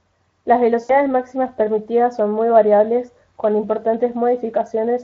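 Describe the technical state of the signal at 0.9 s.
At 0.9 s the stream is in the middle of VoIP packet loss concealed by the speech codec, running from 0.83 to 0.94 s. Roughly 60 ms of packets never arrived, which fits three 20 ms frames, so the Speex decoder filled the gap by extending its last pitch and filter with steadily falling gain. The speech smears into a fading buzzy, coloured tone, and it stays thin and distorted for a moment as it recovers into "máximas permitidas son muy".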